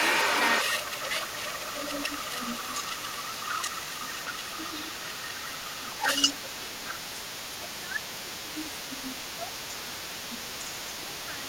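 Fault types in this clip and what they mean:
Other side's voice leaking through: the echo canceller likely failed to strip the far end's loudspeaker sound out of the microphone signal, so that second voice stays in the speech for the whole clip, from 0.0 to 11.48 s. It sits at roughly the same level as the talker's own voice rather than as a faint residue, so two voices compete throughout instead of the far end being reduced to occasional scraps.
Speech suppressed in double talk: when both sides spoke together, the echo canceller likely could not tell the local talker from the loudspeaker echo and pulled the whole signal down. The talker's voice dips briefly at 4.64 to 4.72 s and 5.46 to 5.62 s, by about 5 dB. Deeper drops of about 10 dB follow at 6.33 to 6.84 s, across 7.82 to 10.39 s (about a second of it affected), and at 11.02 to 11.48 s.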